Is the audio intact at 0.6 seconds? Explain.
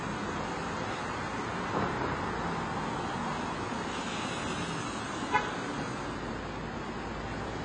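No. AAC compression is present at 0.6 s, as throughout. Nothing sounds above 9.7 kHz, and the audio is dull and smeared with a fizzy warble, likely from AAC-LC coding near 24 kbps, which drops upper bands and coarsely quantises the rest.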